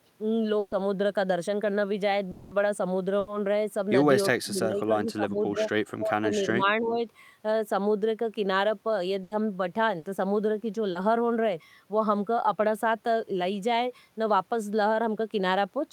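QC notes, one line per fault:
0.59–0.74 s, 3.19–3.30 s and 9.23–9.34 s, burst of packet loss: several consecutive packets failed to arrive in time, so the receiver stretched the last sound across the hole, about 120 ms in the first case and 80 ms in the other two, fading it as it went. A voiced stretch becomes a held buzz and an unvoiced one a dying hiss. The speech then picks up further along, with that slice simply gone.
2.31–2.54 s, long network dropout: the sound freezes into a held, fading tone for about 200 ms and then resumes further on, with the audio from that stretch missing. The gap never falls to silence because the concealment covers its whole length. The likely cause is a network stall long enough that the receiver had nothing fresh to play and could only keep extending the last sound it received.
4.31–5.63 s, 5.99–6.66 s and 6.82–6.99 s, speech suppressed in double talk: the talker's level sags and breaks up in pieces, dipping by about 20 dB over roughly a second in the first stretch, then about 15 dB over roughly 0.4 s, then about 10 dB for a brief moment. 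This likely comes from an echo canceller that could not tell this voice from loudspeaker echo while both sides spoke and turned everything down.
9.99–10.06 s and 10.91–10.98 s, short concealed packet loss: each time, about 40 ms never reached the decoder, and the receiver patched the hole by extending the preceding sound from its pitch or as shaped noise, then blended back into real audio. The result is a quick smear or small wobble rather than a gap.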